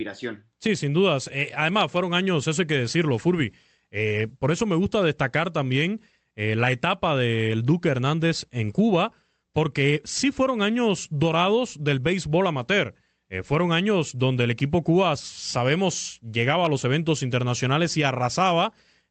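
No technical faults occur at any point in this speech, so there is nothing to describe in time order.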